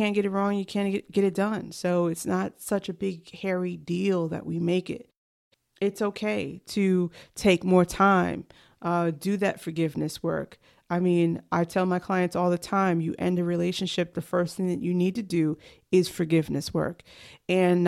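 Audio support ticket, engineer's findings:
Listened to the whole speech recording and found nothing to flag at any point, so no faults to report on this one.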